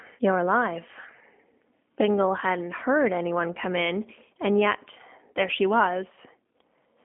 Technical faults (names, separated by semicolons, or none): G.729 codec